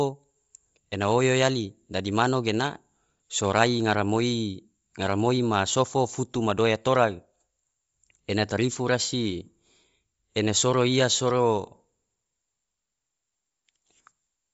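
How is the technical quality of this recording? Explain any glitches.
The speech is clearly degraded by audible codec damage that runs through the whole clip. Nothing is present above about 7.7 kHz, and the upper speech band has a breathy, grainy texture rather than clean detail, which fits Bluetooth LC3 compression as the likely cause. Throughout, a transform codec working at a low rate, consistent with roughly 32 kbps in 10 ms frames, discards much of the high spectrum and fills it with shaped noise. That fill is what separates it from a plain low-pass cut, which would sound dull but smooth, or from MP3-style warbling swirls.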